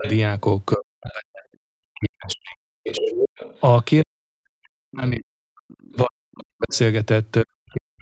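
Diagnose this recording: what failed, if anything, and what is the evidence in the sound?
The failure is in call processing. Speech is suppressed in double talk from 0 to 3.11 s and from 4.02 s to the end. About two seconds of the first stretch dips, with the deepest drop about 40 dB. The likely cause is an echo canceller that cannot separate near speech from loudspeaker echo, so it attenuates both.

The other side's voice is leaking through, again at the call-processing stage. A second voice sits under the talker from 0.04 to 1.13 s at about 15 dB down, and from 2.3 to 3.6 s at about 5 dB down. It returns faintly from 5.7 to 6.77 s at about 30 dB down. This is likely residual echo that the canceller left in the microphone signal. Everything in the clip stops at 8 kHz, which fits a call codec's bandwidth.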